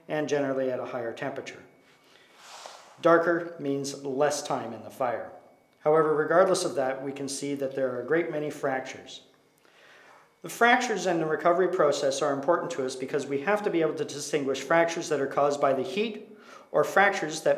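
No technical faults can be heard anywhere here.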